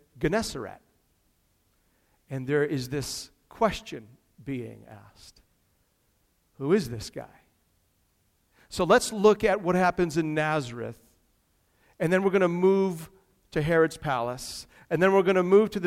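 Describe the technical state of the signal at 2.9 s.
At 2.9 s the speech signal is intact, with no audible fault at that point.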